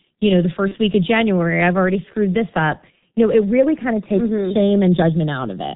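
Speech recorded through a G.723.1 codec, and the coding damage is heavy throughout. Nothing above 4 kHz survives, so the audio is muffled, and the slow update of the spectral and pitch model leaves a hoarse, rough texture with smeared consonants. The sparse detail fits the codec's 6.3 kbit/s mode with its 30 ms frames. There are also two instances of VoIP packet loss concealed by the speech codec. The first runs from 0.68 to 0.75 s, between "you know the" and "week of". The second runs from 2.99 to 3.02 s, right after "already screwed this up". Each gap fits a single lost 30 ms frame. In both places the decoder fills the hole by repeating its last pitch and filter settings at falling gain, so the sound is stretched into a buzzy tone or a fading coloured noise instead of dropping out. Because each frame's state builds on the one before, the weak or distorted quality lingers past the gap before the speech recovers.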